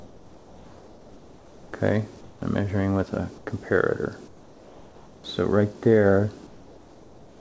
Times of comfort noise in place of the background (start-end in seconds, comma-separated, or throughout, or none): 0.00-1.73, 2.21-2.42, 3.38-3.47, 4.28-5.24, 6.47-7.41